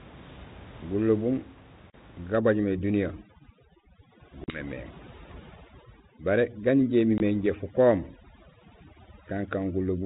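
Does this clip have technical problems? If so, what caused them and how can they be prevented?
Yes. Packet loss on the ADPCM call cuts hard silent holes at 1.9, 4.44 and 7.18 s, lasting 40, 40 and 20 ms, which fits a packet or two dropped each time. The decoder's adaptive predictor and step size then drift out of step with the sender's, so the speech comes back slightly distorted for a few tens of milliseconds. A steadier network path, plus a jitter buffer with proper loss concealment, would stop it.

From 2.36 s to the end there's overdone noise removal. It pushes bands sitting near the noise estimate way down, so the background, room noise about 21 dB under the speech, drops and breaks up into twinkly specks. Just back the reduction strength off so it doesn't chase the quieter parts of the speech.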